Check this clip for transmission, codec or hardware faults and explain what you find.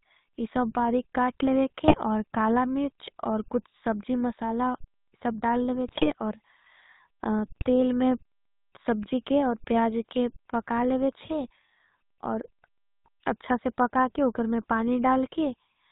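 Two faults are present: GSM full-rate codec coloration across the whole speech clip, and three short bursts of GSM bit errors.

GSM full-rate codec, throughout. The coder models the vocal tract as a filter and excites it with a sparse, regularly spaced pulse train, discarding most of the excitation detail. Nothing above 4 kHz survives. The result is a plainly audible buzzy, gravelly roughness on the voice and a dull, band-limited top end, which fits the 13 kbps full-rate coder.

GSM bit errors, at 1.88 to 1.98 s, 5.87 to 6.12 s and 7.56 to 7.62 s. Corrupted bits reach the decoder and land in the filter, pitch or gain parameters, so a frame is rebuilt with a wrong spectral shape or a sudden level jump. Each burst breaks the voice into squawks, pops and gargling. The longest, at about a quarter of a second, spans several consecutive damaged frames, pointing to an error rate of roughly 1.6 percent on a weak link.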